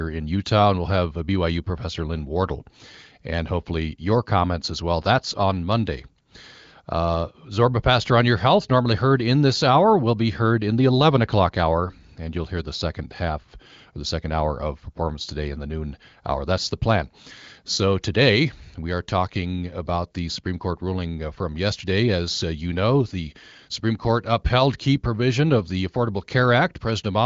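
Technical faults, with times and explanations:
No technical faults are present; the speech is carried over an AMR wideband (HD Voice) link at a rate that fits 18.25 kbit/s, audio is band-limited to about 7.6 kHz, and any coding damage is faint at most.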